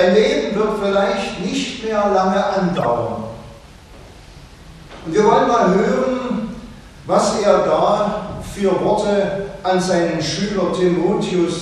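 At 2.75 s a corrupt frame was decoded: bit errors in the compressed stream were played rather than concealed, so a run of roughly four frames put energy at the wrong frequencies. The result is a loud blip lasting about 0.1 s, to 2.85 s, peaking near -10 dBFS.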